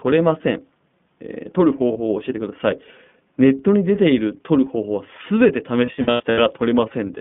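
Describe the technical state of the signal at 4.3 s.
At 4.3 s, as throughout, the speech carries iLBC codec damage. Each 20 ms frame's excitation is coded on its own, which fits the 15.2 kbps mode, and the band runs only from 150 Hz to 3.5 kHz. Unlike a clean narrowband filter, it sounds plainly rough and synthetic.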